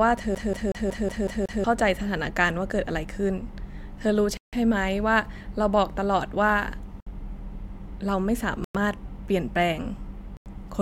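From 0.35 to 1.64 s the speech locks into the stutter of a CD stuck on one turn: a scratch keeps throwing the laser back a track at the same point on each revolution, so one slice of about 0.18 s repeats seven times with a brief mute at every jump. What marks it as a disc skip rather than a dropout is the identical, evenly timed repetition of the same fragment before the audio moves on.

Later the sound simply stops and resumes four times: at 4.37 s for 158 ms, at 7.00 s for 62 ms, at 8.64 s for 104 ms and at 10.37 s for 90 ms. Each is a clean gap of silence with the speech continuing afterwards, nothing replayed, which points to a Bluetooth stall, likely interference delaying packets until the headphones' buffer ran dry. The irregular spacing and varying lengths, with no looping, separate these from the disc skip.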